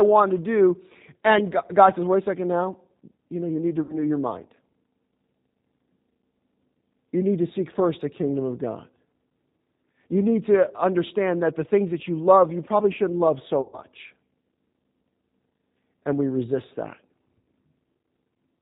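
Throughout the clip the speech passes through the G.729 codec, and the damage is plainly audible. Nothing above 4 kHz survives, so the sound is dull and narrowband. The voice is rebuilt from a vocal-tract filter, a pitch predictor and a handful of pulses per frame rather than carried as a waveform, which gives it a rough, slightly synthetic grain. That character fits the 8 kbit/s G.729A variant.

From 3.83 to 3.98 s, between "know you need to" and "your mind", VoIP packet loss is concealed by the speech codec. About 60 ms of audio is missing, which fits two lost packets. The decoder fills the gap by repeating its last pitch and filter at falling gain, so the syllable stretches and fades. It recovers weakly as new frames rebuild the codec state.

A longer loss of about 120 ms runs from 13.61 to 13.81 s, just after "probably shouldn't love so". It points to four missing packets. The extrapolated sound decays further here and fades before the speech resumes.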